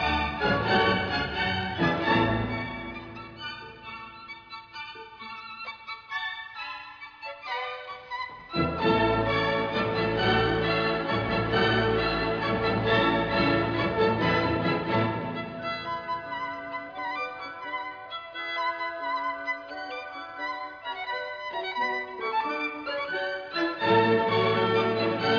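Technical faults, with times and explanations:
No technical faults are audible anywhere in the recording.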